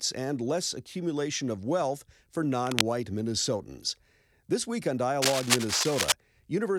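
At 2.66 s, right after "accumulation of wealth for", a burst of scratching noise lasting about 0.18 s sits over the speech at roughly the same loudness. A longer stretch follows "week on", from 5.22 to 6.12 s. Both are cable scratch noise, likely from a worn cable, connector or control being moved, so its contact resistance fluctuates and injects dense, irregular crackle and rustle into the signal.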